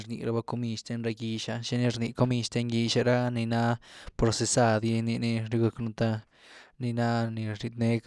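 A speech recording in which the signal carries no audible technical fault at any point.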